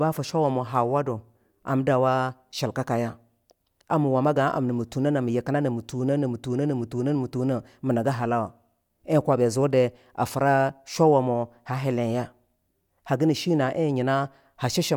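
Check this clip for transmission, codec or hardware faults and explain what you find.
No faults detected.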